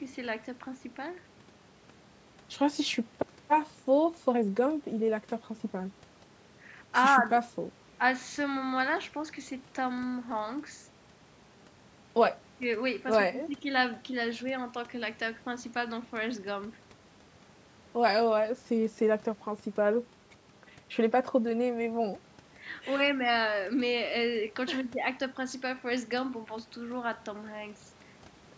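The speech has passed through normal call microphone processing, which leaves nothing above 8 kHz and trims the lowest bass, and no technical faults can be heard in it.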